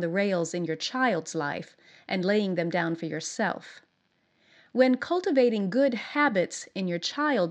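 No technical fault can be heard anywhere in the recording. Nothing in it calls for a time-stamped note.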